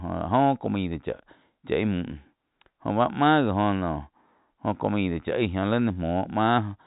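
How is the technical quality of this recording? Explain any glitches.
There's nothing here that counts as a glitch: it's speech carried over ordinary G.711 telephone coding, so everything above about 3.8 kHz is missing just as on a landline call, and that's simply how the format works.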